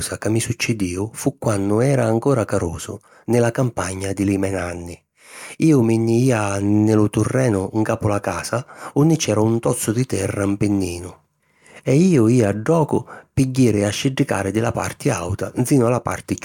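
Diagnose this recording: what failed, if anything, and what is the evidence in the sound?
Nothing in the chain seems to have failed here, since the speech comes across without any audible dropouts, glitches or distortion to point to a problem at any stage.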